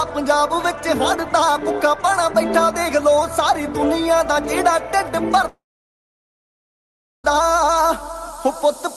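At 5.41 s there is a short concealed packet loss: about 10 ms of audio failed to reach the decoder in time, and the receiver patched the gap by extending the preceding sound before crossfading back into the real signal. It is audible only as a tiny smear or wobble, band-limited by the call codec's roughly 12 kHz ceiling.

Moments later, from 5.49 s to 7.25 s, the audio stops for about 1.75 s, most likely a long network dropout. The receiver first continues the last sound as a short buzz or hiss that dies away within about a tenth of a second, after which roughly 1.65 s of silence follows. When the signal resumes at 7.25 s, the audio from that stretch is simply missing.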